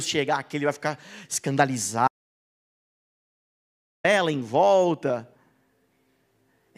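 At 2.08 s the speech cuts off mid-flow and the track falls to complete silence until 4.04 s, when the voice returns just as abruptly. This audio dropout to silence removes nearly 2 s, most likely because the input signal was lost while zeros kept being written. No room tone survives in the gap. On a waveform it shows as a flat line, and on a spectrogram as a fully blank vertical band with hard edges.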